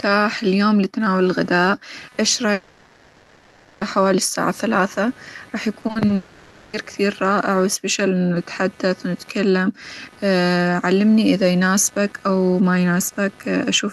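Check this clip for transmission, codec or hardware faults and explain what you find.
Three faults are present in this speech recording: computer activity noise throughout, two gaps that are likely long network dropouts, and a short burst of repeated packet loss.

Computer activity noise runs through the whole clip as a buzzing chirp that pulses around 300 times a second, about 30 dB below the speech. Processor, graphics or mouse load shifts the shared ground of the audio circuit, so the interference rises and falls with the computer's activity rather than with the talker. That independence from the speech sets it apart from codec noise, which tracks the signal. The Opus call path's own band limit near 12 kHz is a separate, steady property of the audio.

The first likely long network dropout runs from 2.53 to 3.83 s, after "لتناول الغداء إ يش" and before "حوالي الساعة ثلاثة راح". No real audio arrives for about 1.3 s. 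The receiver fills the entire hole by stretching the last sound into a smeared, buzzy continuation, and the speech resumes with that stretch simply gone. A single unbroken fill of this length is what separates it from repeated packet loss, which chops through the audio in brief fragments.

Repeated packet loss (robotic sound) follows from 5.81 to 6.11 s, after "حوالي الساعة ثلاثة راح". Five separate holes, none longer than 40 ms, occur in quick succession, and about 40% of that 0.3 s span is patched by continuing the previous sound. Real and synthetic pieces alternate, so the speech turns choppy. The rapid alternation distinguishes it from a dropout's single long fill.

The second likely long network dropout runs from 6.15 to 6.75 s, ending just before "كثير رائع". It follows almost immediately after the packet-loss burst. The missing 0.58 s is entirely replaced by concealment, a continuation of the last sound that carries no new content. 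It is shorter than the first dropout but has the same smooth, unbroken fill, with no chopping between fragments.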